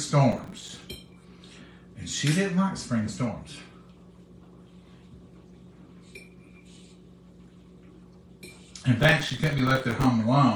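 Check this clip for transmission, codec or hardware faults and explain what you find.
Two bursts of processor overload crackle, from 0.32 to 0.82 s and from 9.00 to 10.06 s. The processor missed deadline after deadline on very short buffers, on the order of a few milliseconds each. Every miss dropped in a brief hole of silence with hard edges, dozens of them in the later, longer burst. The result is a gritty, rapid tearing over the sound. Unlike a single network dropout, it is a dense, fast train of tiny clicks that stops cleanly once the load eases.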